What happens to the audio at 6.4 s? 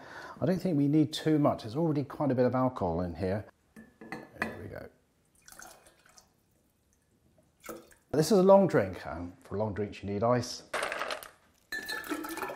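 Nothing goes wrong at 6.4 s; the audio runs through that moment intact, with no dropout, click or distortion.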